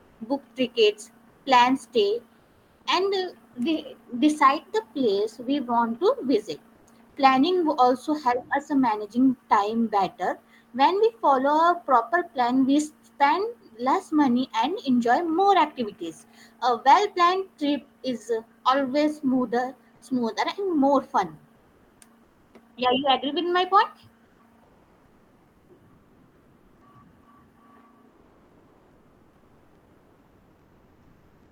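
Comfort noise in place of the background fills the pauses at 0.00 to 0.19 s (before "book tickets plan stay"), 1.29 to 1.45 s (between "book tickets" and "plan stay"), 2.39 to 2.85 s (after "book tickets plan stay"), 6.75 to 6.87 s, 21.55 to 22.53 s, 24.25 to 26.81 s and 28.09 s to the end. In each gap the textured background turns into a flat, even hiss, in most of them about 1 to 4 dB quieter. The likely cause is discontinuous transmission, consistent with Opus DTX: the sender goes quiet between phrases and the receiver synthesises approximate noise until the speech resumes.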